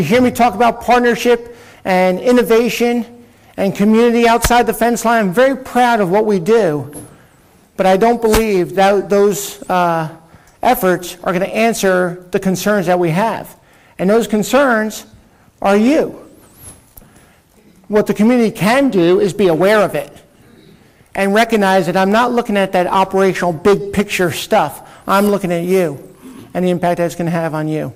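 Nothing in the audio trips the ear at any point, so there's no technical fault to point to here.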